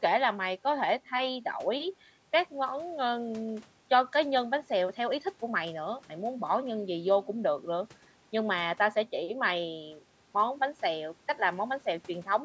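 Nothing stood out on listening to this speech, which carries the ordinary sound of call microphone processing, with the lowest bass trimmed and nothing above 8 kHz.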